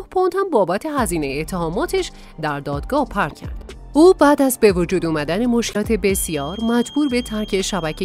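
At 3.28 to 3.32 s and again at 5.71 to 5.76 s there is damaged data in the compressed stream: the decoder misreads corrupted frames, loses sync and hunts for the next header, giving a brief glitch. On a spectrogram each shows as a short broadband smear with a discontinuity in the waveform.

From 5.99 s to the end, a thin steady tone at 3.2 kHz sits roughly 20 dB under the main sound, swelling and fading slowly in level. This is likely a feedback whistle, with the speaker-to-microphone loop hovering at the edge of oscillation, and it appears as a single horizontal line on a spectrogram.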